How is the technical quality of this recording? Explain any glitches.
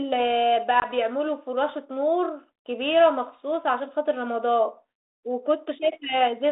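The recording is narrowband telephone speech carried over G.726 ADPCM at 32 kbit/s, with the sound confined to roughly 300 Hz to 3.7 kHz and a light codec grain. One glitch stands out.

From 0.80 to 0.86 s there is packet loss on an ADPCM call. A couple of packets go missing, and about 20 ms of audio is replaced by a hard-edged silent gap. ADPCM sends only differences from an adaptive prediction, so the gap leaves the decoder's predictor and step size out of step with the sender's. Speech therefore comes back with a brief level or distortion error that settles within tens of milliseconds. That messy re-entry tells it apart from a simple dropout on PCM audio, which resumes cleanly.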